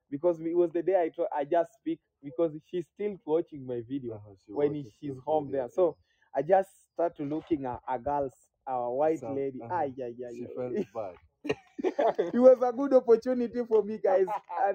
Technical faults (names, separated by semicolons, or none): noise suppressor applied to music or sounds; sound cut by the noise suppressor